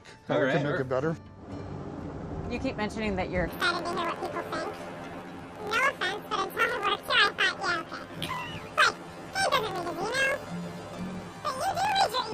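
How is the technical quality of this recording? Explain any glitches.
The recording has one serious glitch. From 3.48 s to the end, the sound jumps an octave high with a rapid 43 Hz flutter. This is planar audio read as interleaved: each 23.22 ms block of left-then-right samples, fitting a 1024-sample block, plays twice at double speed.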